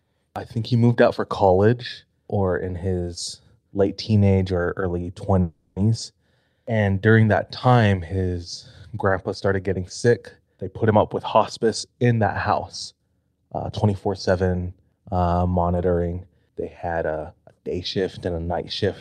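Right after "late teenage or early", from 5.41 to 5.78 s, the speech halts for about 350 ms while the last sound is stretched into a fading buzz, a call audio freeze. The likely cause is packets stalling in transit until the jitter buffer emptied. Unlike a dropout, nothing is lost: the speech resumes exactly where it stopped, only later.

After "grandpa started getting sick", from 10.56 to 12.52 s at 110% speed, and again from 12.92 to 14.30 s at 111%, a jitter buffer speed-up trims short pitch-period slices to shed surplus delay, removing roughly 0.2 s and then 0.15 s. The speech sounds hurried, but its pitch stays unchanged, unlike a simple playback-rate error.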